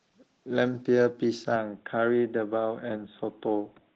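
From start to finish the speech carries Opus voice compression, and it's plainly audible. Below 8 kHz a linear-prediction coder is doing the work, with a transform layer on top, so the band stays full. The excitation is coded coarsely, giving a hoarse, slightly robotic edge. That amount of damage fits a low bitrate of around 16 kbps in 20 ms frames.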